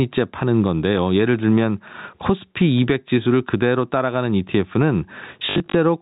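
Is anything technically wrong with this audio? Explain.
Yes, there are two faults in this speech, heard through a telephone-style band that stops at 4 kHz, as G.711 coding does.

Gain pumping runs through the whole clip. The likely cause is input gain set far too high for the microphone, with a fast limiter or compressor clamping down whenever the speech gets loud. The level swings by around 20 dB. Loud and quiet passages end up squeezed toward the same level, which makes the speech sound flattened and crowded.

Packet loss with last packet repeated occurs between 5.46 and 5.74 s, right near the end. Across that 280 ms stretch about 160 ms of audio went missing, and the longest continuous gap is 60 ms. The pattern fits 20 ms packets. To fill each gap the receiver replayed the last good packet. Those repeats seldom line up with the pitch cycle, and the longer runs produce a buzz at about 50 Hz, heard as a brief robotic stutter.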